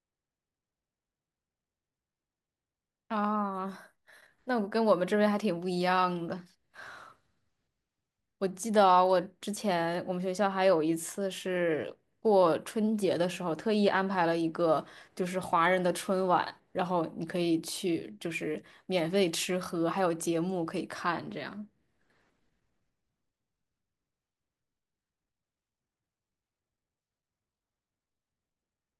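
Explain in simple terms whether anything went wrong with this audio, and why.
Nothing went wrong here.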